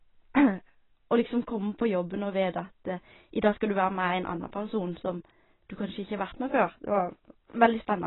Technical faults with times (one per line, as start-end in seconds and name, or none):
0.00-8.06 AAC compression